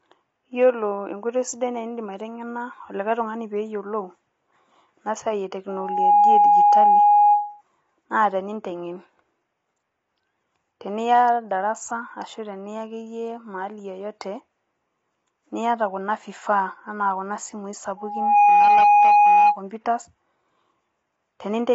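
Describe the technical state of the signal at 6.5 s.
At 6.5 s a loudspeaker feedback squeal is under way, running from 5.69 s to 7.62 s. A microphone is hearing the loudspeaker it drives, and at 827 Hz the loop gain exceeds unity. That single tone swells within a fraction of a second and sits roughly 10 dB above the speech.

Underneath, the speech sounds rough and grainy, with noise between the harmonics and nothing above 7.8 kHz. That is likely low-delay AAC compression (AAC-ELD), whose short frames resolve pitch poorly. The plainly audible damage fits a bitrate around 24 kbps.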